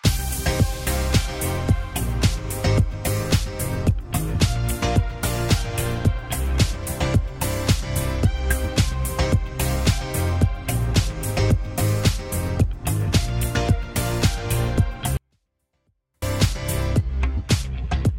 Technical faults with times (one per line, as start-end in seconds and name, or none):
15.17-16.22 24-bit alignment error (too quiet)